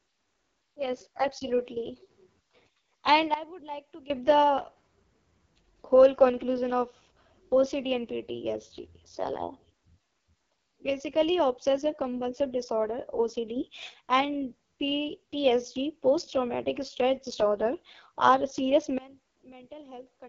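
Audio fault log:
Throughout: AMR wideband (HD Voice) codec. The speech sounds rough and raspy, and nothing is present above 7.3 kHz. Heavy damage like this fits AMR-WB's 6.6 kbit/s mode, where too few pulses describe the voice and the top band is filled with noise.
3.34 to 4.1 s, 13.56 to 13.9 s, and 18.98 s to the end: sudden gain jump. The level steps instantly, down about 17 dB, up about 6 dB, and down about 21 dB. Speech and background shift together, likely from digital gain applied without a ramp.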